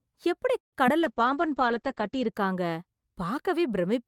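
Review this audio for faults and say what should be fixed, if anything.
A call audio freeze runs from 0.59 to 0.75 s: the sound stops for about 130 ms, then resumes where it left off, so nothing is lost but everything after is delayed. The likely cause is delayed packets draining the jitter buffer. A waveform shows a flat gap; a spectrogram shows a blank column. A larger adaptive jitter buffer or a steadier network path would prevent it.

Short concealed packet loss occurs at 0.87 to 0.90 s. About 20 ms of audio never arrived, and the receiver bridged part of it by extending the preceding sound, leaving a brief smear. A spectrogram shows smeared harmonics; the waveform shows the filled stretch blending back into the real audio. Forward error correction or redundant packets would prevent it.

A call bitrate drop lasts from 1.01 to 2.40 s. The encoder fell from 64 to 10 kbps, staying at the lowest rate for about 1.2 s, and the bandwidth narrowed from 20 kHz to 8 kHz, so the speech turns muffled and rough. 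A spectrogram shows everything above 8 kHz cut off abruptly. Better bandwidth estimation and a higher minimum bitrate would prevent it.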